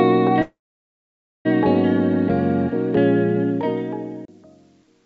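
From 0.42 to 1.47 s there is a call audio freeze, likely from delayed packets draining the jitter buffer. A brief fading buzz or hiss gives way to about 0.92 s of silence, shown as a flat waveform and a blank spectrogram band. The sound then resumes where it stopped, now running about 1.03 s late.

From 3.37 s to the end, the fade-out shows truncation distortion on a fade, which fits a 10-bit stage without dither. The tail turns gritty. The waveform becomes coarse square steps, and the spectrogram shows broadband grit, all below the 8 kHz ceiling of the G.722 call path.

Between 4.25 and 4.28 s a CD skip mutes the sound for roughly 30 ms. The sound then jumps to another point. On the waveform this is a short flat gap with a discontinuity, and on the spectrogram a thin vertical line.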